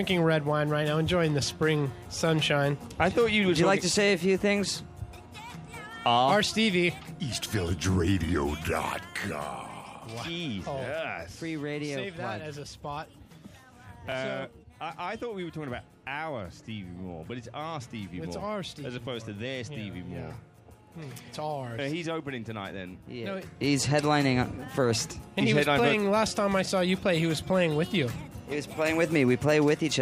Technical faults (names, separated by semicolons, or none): zipper noise